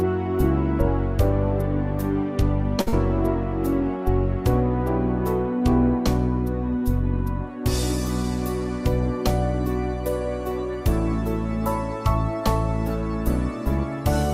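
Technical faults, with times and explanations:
2.81–2.89 s, short stall from a late packet: the sound hangs for a moment, held on one spot for about 52 ms with a faint buzzy or slightly dipped quality before it moves on. A packet arrived late and the jitter buffer ran dry, so the receiver kept extending the last bit of audio until the data turned up, then resumed exactly where it had stopped. Nothing is lost, but everything after this point sits about 52 ms later than before.
2.89–2.94 s, short concealed packet loss: right after the stall comes a brief smear or wobble, and a short, sharp sound here can go missing. About 40 ms of audio never reached the decoder in time, so the receiver covered the hole with roughly 38 ms of synthesised continuation. It extends the preceding pitch if the sound was tonal, or uses shaped noise if it wasn't, then cross-fades back into the real signal, which is why the join sounds blurred rather than silent.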